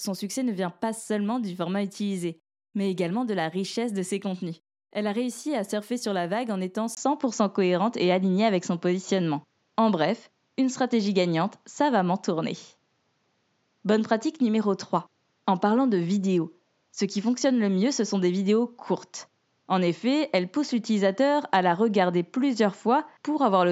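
Speech, which at 6.95 s breaks for about 20 ms and then loses everything above 7.6 kHz, shifts in level by roughly 5 dB and gains a new, faint noise floor. This is likely an input switched to a poorer device, not a codec bandwidth drop, because tone, level and noise change together.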